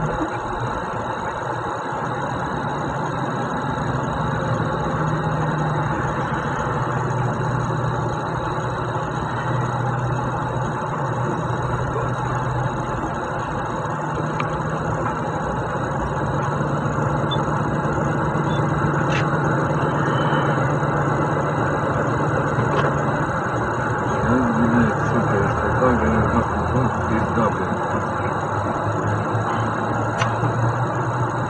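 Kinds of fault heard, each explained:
No technical fault can be heard anywhere in this audio. Nothing in it calls for a line of its own.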